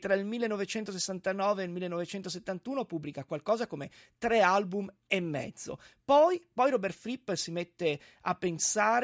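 No technical faults can be heard in this speech recording. Nothing in the signal breaks, jumps or drops out at any point.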